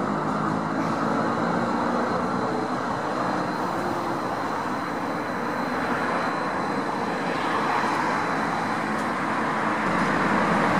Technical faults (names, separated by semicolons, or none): USB whine